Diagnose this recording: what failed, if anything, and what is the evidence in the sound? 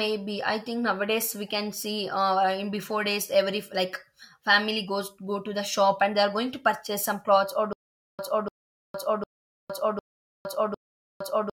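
Playback or streaming likely stalled at 7.73 s, replaying its last fragment at each retry and then running dry. The result is stutter with silent gaps: a 294 ms burst of speech returns five times every 754 ms, with 460 ms of digital silence between, to the end. The speech that should have followed is lost.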